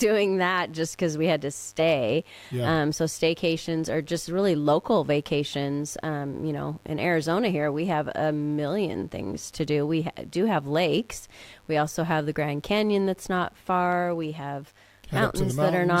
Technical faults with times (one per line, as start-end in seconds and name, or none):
0.00-16.00 mains buzz